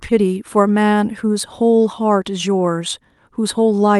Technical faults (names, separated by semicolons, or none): none